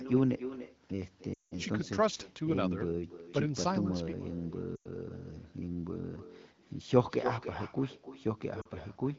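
From the very start there's echo with no canceller: the far end is evidently playing the call on a loudspeaker and its mic is feeding it straight back, with nothing stripping it out. So every phrase gets a second, thinner copy about 11 dB down, trailing by roughly a third of a second. It sits under the whole clip and gives the speech a doubled, hollow quality.

On top of that there are three bursts of lost AMR speech frames. At 1.34 to 1.53 s the longest gap, about 180 ms, drops the sound to near silence within a couple of frames before it comes back a bit rough. That length fits around nine 20 ms frames failing. At 4.76 to 4.88 s a 100 ms loss gives a shorter drop to near silence. At 8.61 to 8.68 s just 40 ms goes, heard as a quick dip. In each case the decoder is patching over corrupted frames by repeating its last good settings at falling gain. The wideband HD Voice codec underneath leaves only light coding texture.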